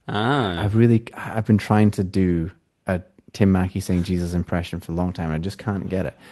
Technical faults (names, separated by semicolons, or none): none